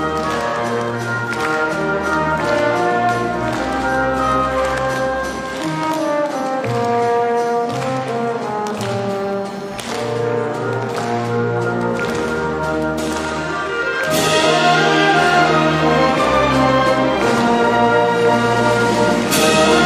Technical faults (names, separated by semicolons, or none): none